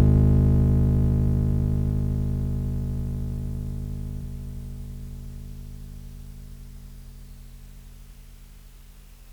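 At 4.21–4.23 s and 8.11–8.14 s, compressed frames are skipped: the music jumps ahead by about seven, then three, 46.4 ms frames (roughly 0.4 s and 0.15 s lost). Each join shows on a spectrogram as a narrow vertical discontinuity where the harmonics shift abruptly.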